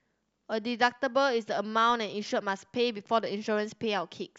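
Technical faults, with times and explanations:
1.90 s, DC step: the waveform's zero line suddenly jumps by about -43 dBFS, so you get a soft low thump under the speech. The offset doesn't hold. It bleeds away as a 20 Hz high-pass pulls the baseline back to centre.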